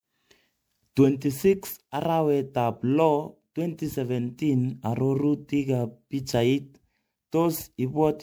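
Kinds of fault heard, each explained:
Generation loss: the speech carries a swirly, smeared, hollow character from start to finish, well beyond what one encode at this quality would leave, and consonant attacks come out soft and blurred. That's likely from the audio being put through a lossy codec over and over. Each pass requantises on a shifted frame grid, so noise and spectral holes pile up. It fits something like seven rounds of MP3 at about 128 kbit/s.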